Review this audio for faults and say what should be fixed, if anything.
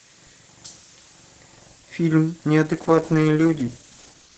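A call bitrate drop starts at 2.65 s and lasts to the end of the clip at 4.37 s, with the worst stretch lasting about 1.5 s. The speech turns rough and muffled as the encoder codes far more coarsely. The sound fits a fall from about 32 kbps to 8 kbps. On a spectrogram, the energy up to the call path's 8 kHz limit thins sharply and the upper band goes patchy and smeared. The waveform envelope barely changes. To prevent it, give the call enough network headroom and set a higher minimum bitrate for the encoder.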